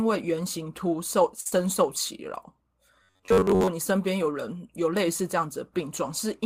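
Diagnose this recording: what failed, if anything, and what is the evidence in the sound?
At the network and jitter-buffer stage, a packet arrived late and the buffer ran dry. From 1.40 to 1.47 s the receiver held the last sound for 52 ms until it came in. This short stall from a late packet drops nothing but adds 52 ms of delay, and the stretched speech is held too long, with a slight buzz or dip.

Right after, a packet was lost on the network. From 1.48 to 1.63 s, 40 ms of speech was missing and was filled by continuing the previous sound, with roughly 10 ms more blended in. This short concealed packet loss is heard as a brief wobble.

At the driver or buffer stage, audio was likely delivered too seldom, so short buffers were replayed instead. From 3.03 to 3.69 s, most of the speech is repeated material, which produces robotic sound from repeated short buffers: a rigid, metallic buzz at 93.8 Hz, which fits a buffer of about 10.7 ms.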